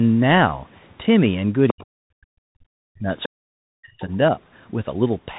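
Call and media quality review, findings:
Bluetooth CVSD headset codec, throughout. Band stops at 4 kHz. Sibilants scratchy, loud bright passages distort as the one-bit delta steps fail to keep up. Granular hiss under the speech. Fits a 64 kbit/s CVSD headset link. Damage plainly audible.

Unconcealed Bluetooth headset packet loss at 1.01–1.03 s. Gap of 3.8 ms, about one packet. Hard-edged hole. No concealment, so silence or an idle pattern fills the slot. Level returns low for a moment as the CVSD step size rebuilds.

Other side's voice leaking through at 1.68–1.86 s, 3.23–3.29 s and 4.00–4.15 s. Second voice about 10, 15 and 25 dB under the talker. Likely residual loudspeaker echo the device's echo canceller missed.

Speech suppressed in double talk at 1.70–3.09 s and 3.27–4.01 s. Talker's voice dips, at worst around 40 dB down. About a second, then half a second. Likely the echo canceller attenuating both voices while the far end talked.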